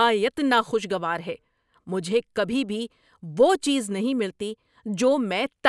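Speech recording; no technical faults present at any point.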